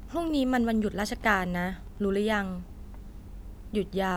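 From 0.0 to 2.0 s, Wi-Fi interference sits under the speech. A nearby radio's beacon, repeating every 102.4 ms, is picked up and rectified by the audio circuit. It sounds like steady ticking, about ten per second, roughly 30 dB below the speech.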